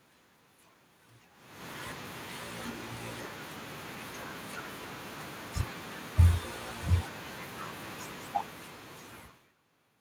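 Automatic gain falling runs from 7.91 to 9.47 s in this speech recording. The automatic gain control judged the input too loud or its background noise too strong and pulled its gain down gradually, by about 8 dB over that stretch. The room noise sinks along with the voice, which separates it from the level shift of the talker moving near 9.0 s (like the one near 1.5 s), where only the voice changes and the background stays put.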